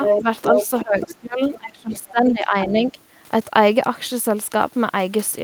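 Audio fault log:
0.04–0.23 s and 0.42–0.85 s: other side's voice leaking through. A second voice sits at about the talker's own level, likely loudspeaker echo the echo canceller left in the microphone signal.
1.02–1.15 s, 1.95–2.11 s and 2.61–2.67 s: other side's voice leaking through. Fainter scraps about 10 to 25 dB below the speech, likely residual echo the canceller did not fully remove.
0.22–0.26 s: speech suppressed in double talk. A brief dip of about 5 dB where both voices overlap, likely the canceller turning the whole signal down.
0.70–2.97 s: speech suppressed in double talk. The talker's voice drops by up to about 20 dB, roughly 1.5 s in all, likely the canceller attenuating overlapped speech along with the echo.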